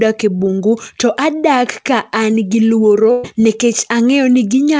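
Short concealed packet loss at 0.38 to 0.41 s, just before "bungu to": about 20 ms of the call arrived too late, and the receiver patched roughly 15 ms by extending the preceding sound before blending back, leaving a brief smear in the speech. A burst of packet loss follows at 3.11 to 3.25 s. Around 120 ms went missing in a row, and concealment filled all of it with a continuation of the last sound that fades as it goes, with no silence, before the speech resumes further on. Both gaps sit within G.722 audio at 64 kbps, which has no content above 8 kHz.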